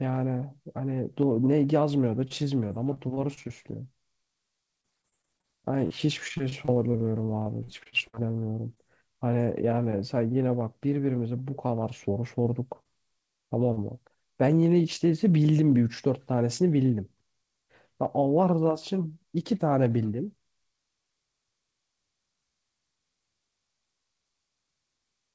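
From 2.28 to 3.46 s and again from 4.81 to 8.79 s, repeated packet loss (robotic sound) chops the speech. Holes of up to 26 ms, then up to 58 ms, arrive one after another, each bridged by extending the last sound. The constant patching gives a choppy, stuttering texture rather than a single glitch.

Later, short concealed packet loss appears as isolated events at 12.43–12.46 s, 12.83–12.87 s and 13.73–13.79 s. Each hole is only 20 to 40 ms and stands alone, so it passes as a quick smear or wobble, with no sustained robotic quality. The band-limited sound, with nothing above 8 kHz, points to a G.722 call codec.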